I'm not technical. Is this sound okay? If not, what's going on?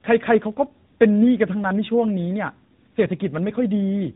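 No. Throughout the clip, the speech has tandem speech coding. The call seems to have crossed more than one phone network, and at each crossing the voice was unpacked and squeezed again. Each pass roughens what the last one left behind. Nothing above about 3.8 kHz survives, so it sounds muffled. What sets this apart from a single poor connection is the extra warbly, gritty texture, which fits two speech compressors in a row.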